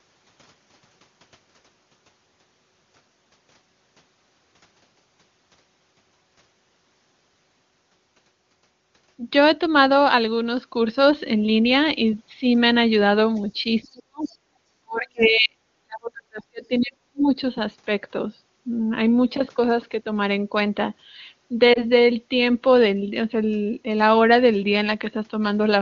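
A speech recording carried over AMR-WB (HD Voice), whose full wideband spectrum shows no obvious coding damage, with faults clustered in two places. Faint scraps of the other side's voice leaking through appear at 13.83, 14.27, 15.19 and 16.81 s, about 35, 30, 30 and 20 dB below the talker. They show on a spectrogram as thin, detached harmonic traces, likely residual loudspeaker echo the canceller missed. Speech suppressed in double talk follows from 13.89 to 14.31 s, 14.5 to 15.58 s and 15.82 to 17.34 s. The waveform envelope collapses by about 35 to 40 dB, leaving near-blank spectrogram patches, likely as the canceller ducks both voices. Lost AMR speech frames at 21.73 to 21.84 s produce a short dip or warble, consistent with a single 20 ms frame being concealed. It appears as a brief smeared, lower-energy column in the spectrogram.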